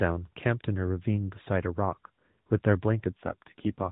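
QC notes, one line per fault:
3.16 s to end, AMR rate drop: the speech turns rougher, buzzier and more synthetic for the last 0.75 s, with no gap and no change in bandwidth. The network pushes the AMR-NB codec down from 12.2 kbps to 4.75 kbps, leaving far fewer bits for each frame's excitation pulses and spending them on error protection instead.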